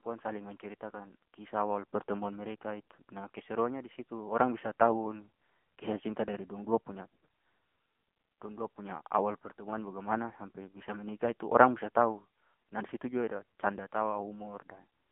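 Throughout, the speech has been carried by the AMR narrowband mobile codec. It is squeezed into a 200 Hz to 3.4 kHz telephone band with nothing above 3.6 kHz, and the plainly buzzy, synthetic quality fits a low mode near 8 kbps.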